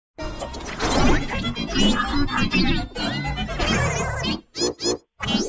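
No technical faults can be heard anywhere in this audio.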